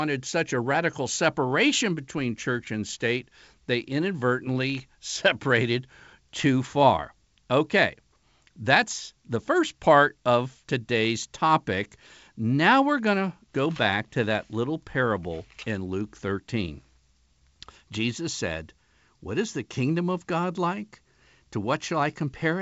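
Nothing goes wrong anywhere in this speech, which has simply come through a call path whose sound stops at around 8 kHz, as you'd expect from a wideband codec like G.722.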